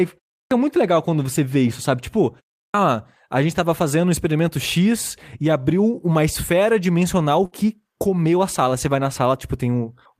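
At 0.41 s and again at 2.63 s, speech resumes after a pause of about 0.3 s with its onset missing, a clipped start after a pause. The output device appears to drop into a sleep state during the silence and needs time to wake and lock again before it passes audio. The first 102 ms is swallowed at 0.41 to 0.51 s, and the first 112 ms at 2.63 to 2.74 s, so each phrase begins abruptly without its initial sounds.

From 7.45 to 7.55 s there is a burst of packet loss. Roughly 60 ms of audio never arrived in time to be played. The receiver filled the gap for about 62 ms by extending the last received sound and attenuating it as it went, heard as a brief held buzz or fading hiss. Playback then picks up further along, with the intervening speech absent.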